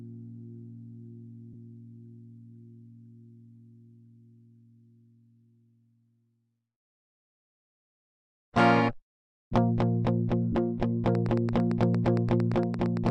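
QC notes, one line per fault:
1.53 s and 10.52 to 10.55 s, lost LE Audio frames: Bluetooth LE Audio frames dropped out, and the LC3 decoder filled the gaps by repeating the last spectrum with scrambled signs. That gives a brief noisy smear, 15 ms then 30 ms, which fits two and then four 7.5 ms frames.
11.15 to 13.10 s, train of clicks: A likely source is interference from nearby equipment or a struggling interface injecting a pulse into the signal. The result is a regular ticking of around twenty alike clicks at 8.8 per second, peaking about 5 dB above the sound.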